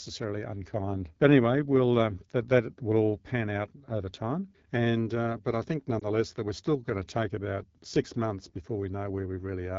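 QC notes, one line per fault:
throughout, AMR wideband (HD Voice) codec: The speech was coded with AMR-WB at a low rate, consistent with the 8.85 kbit/s mode. That is too few bits for the pulse-driven vocal tract model, so the speech sounds plainly rough and raspy. Shaped noise stands in for the 6.4 to 7 kHz band.
5.99–6.08 s, lost AMR speech frame: A radio error corrupted a speech frame, which failed its checksum. The decoder filled the 20 ms hole, which points to a single lost frame, by reusing the last good pitch and vocal tract settings at reduced gain. This is heard as a brief dip or warble, after which the speech returns momentarily weak or rough.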